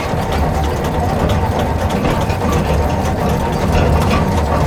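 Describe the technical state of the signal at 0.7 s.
At 0.7 s the signal is intact, with no audible technical fault at that moment.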